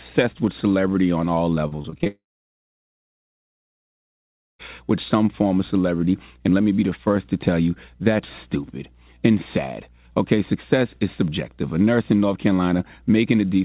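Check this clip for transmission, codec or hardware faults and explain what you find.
Two transmission faults occur back to back early in this speech clip. The call path carrying it cuts off everything above 4 kHz, which fits G.711 mu-law at 64 kbps.

Repeated packet loss (robotic sound) runs from 1.68 to 2.07 s. Six short gaps, the longest 32 ms, were each patched by extending the sound just before it, so about a third of that stretch is filler. The speech comes out choppy, with fragments missing.

A long network dropout is the likely cause of what happens from 2.07 to 4.61 s. About 2.5 s of audio never arrives. The last sound is briefly stretched into a fading buzz or hiss, then about 2.4 s of silence follows. Speech resumes afterwards with the lost portion simply gone.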